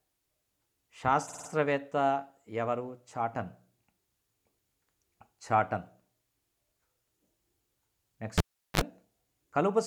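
At 1.27 s a short run of compressed frames was sent repeatedly, so the decoder plays a 52 ms block four extra times, which fits a pair of frames. It stutters until 1.48 s, adding 209 ms.

At 8.38 s a live cable is pulled out and reinserted. A pop opens roughly 386 ms of near silence, a 45 ms burst of 50 Hz mains buzz follows as the tip makes contact, and a second pop at 8.81 s brings the sound back.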